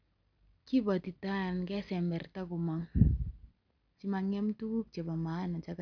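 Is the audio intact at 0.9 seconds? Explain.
Yes, at 0.9 seconds the speech plays through cleanly, with no audible fault at that moment.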